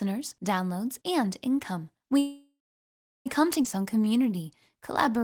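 From 2.19 to 3.28 s there is a call audio freeze, likely caused by packets stalling in transit so the jitter buffer ran dry. The receiver stretched the last sound into a fading buzz or hiss, then held silence for about 0.7 s, inserting roughly 1.06 s of gap without losing any speech.

From 3.64 to 3.66 s a skip ahead follows. About 0.7 s of speech was discarded while later audio waited in the buffer, and playback jumps straight past it. The two sides are butted together almost directly, with barely any bridging between them.

From 3.79 s to the end at 5.23 s comes a jitter buffer slow-down. With its reserve running low or its target delay just raised, the receiver repeated single pitch periods many times over, adding 120 ms. Speech runs at 92% speed with its pitch unchanged, so sounds come out drawn out.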